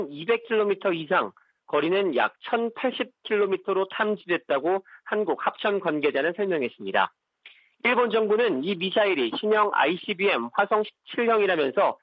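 No technical faults are audible.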